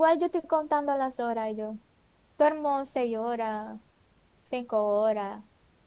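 Nothing's wrong here: it's a speech recording carried over a G.711 A-law call line with nothing above 4 kHz, as that codec normally delivers, and the room noise sits about 40 dB below the speech.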